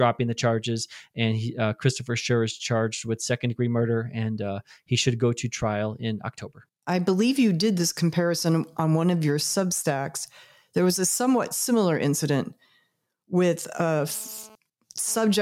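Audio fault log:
13.75–15.35 s, GSM phone buzz: a nearby 2G phone transferring data transmits in bursts about 217 times a second, and the audio circuitry rectifies those radio pulses, adding a hard, raspy 217 Hz buzz rich in harmonics, about 27 dB below the speech, that comes and goes.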